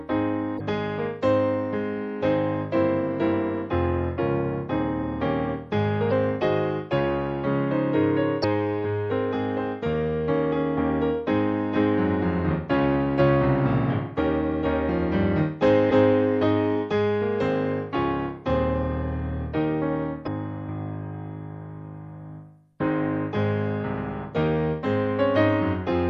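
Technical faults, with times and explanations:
Throughout, MP3 compression: the whole clip carries plainly audible codec damage, with a watery, swirling quality where weak frequency detail drops in and out from one frame to the next. Sharp onsets are smeared rather than crisp. The degree of loss points to a low bitrate, likely around 64 kbps, where the encoder runs short of bits and discards treble and quiet components to stay within budget.
0.56, 6.08, 8.40, 15.87 and 20.23 s, damaged data in a compressed stream: five brief glitches, each lasting about 44 ms, heard as a short squawk or blip that breaks the flow of the sound. Corrupted bytes in the encoded stream make the decoder misread or reject the frames there. It loses its place and resynchronises on the next valid frame header, producing a garbled burst in place of the intended audio.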